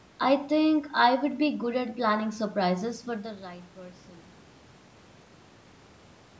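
No audible faults in this speech.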